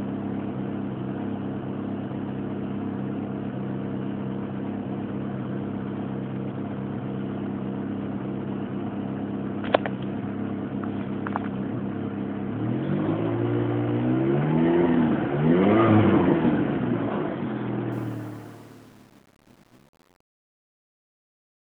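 From about 17.92 s the fade-out toward the end picks up truncation distortion on a fade, getting worst from 18.21 s to 21.8 s. The fade itself starts around 17.9 s, but the stage doing it keeps only about 9 bits with no dither. As the level sinks toward the smallest step, the waveform collapses into coarse square steps, so the tail turns gritty.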